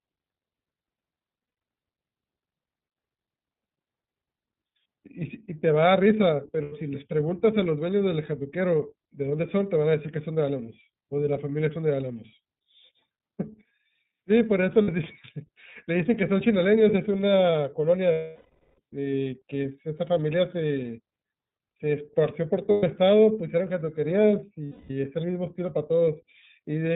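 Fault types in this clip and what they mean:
iLBC codec: throughout, band-limited below 4 kHz with a slightly rough, synthetic speech quality, which fits iLBC's 30 ms frame mode at 13.33 kbps.
lost iLBC frames: at 1.46, 6.63, 14.82, 18.12 (longest, 0.66 s), 22.71 and 24.66 s, the decoder repeats the last pitch cycle as a buzzy held vowel, fading over longer gaps.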